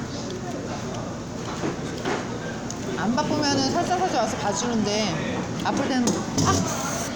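Nothing in the clip points to a technical problem.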